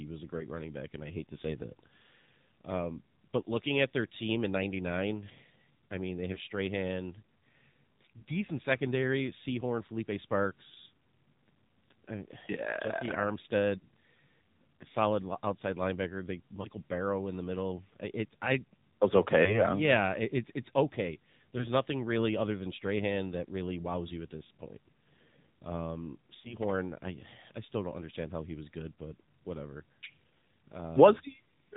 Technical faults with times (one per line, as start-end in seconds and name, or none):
0.00-31.77 AMR narrowband mobile codec
0.38-0.47 lost AMR speech frames
6.34-6.38 lost AMR speech frames
13.78-13.87 lost AMR speech frames
16.62-16.68 lost AMR speech frames
19.44-19.64 lost AMR speech frames
21.58-21.65 lost AMR speech frames
26.40-26.55 lost AMR speech frames